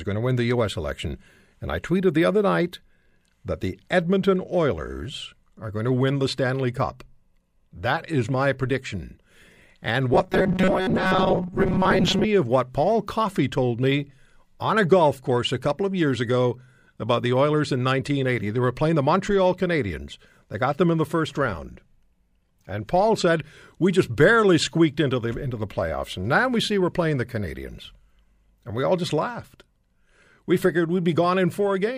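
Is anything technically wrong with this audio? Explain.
Yes. From 10.14 to 12.25 s the speech has robotic sound from repeated short buffers. The likely cause is that fresh audio stopped arriving often enough, so playback kept looping a tiny slice of about 5 ms, repeating roughly half the time while the real audio in between was dropped. That loop imposes its own fixed pitch of 188 Hz, so the speech becomes a stiff, metallic buzz that only loosely follows the original.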